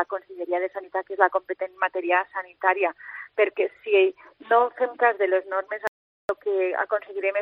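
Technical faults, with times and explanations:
5.87 to 6.29 s, audio dropout to silence: the sound cuts off abruptly and resumes 0.42 s later with no room tone in between, likely because the input was briefly lost while zeros kept being recorded. The waveform shows a near-flat line and the spectrogram a blank band.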